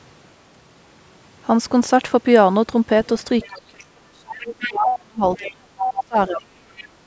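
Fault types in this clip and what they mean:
Other side's voice leaking through: Brief scraps of a second voice appear at 3.40 to 3.47 s, 4.45 to 4.72 s, 5.35 to 5.50 s, 5.77 to 6.03 s and 6.76 to 6.87 s. The likely cause is that the far end was playing on the talker's loudspeaker and the echo canceller left part of it in the microphone signal. Most scraps sit well under the talker, but the one near 5.8 s comes close to the talker's level.
Speech suppressed in double talk: From 3.47 to 6.62 s the talker's own voice sinks, dropping at its deepest by something like 35 dB, for about 3 s in all. This is likely the echo canceller hearing both sides at once, failing to tell the talker from the returning echo, and pulling the whole microphone signal down.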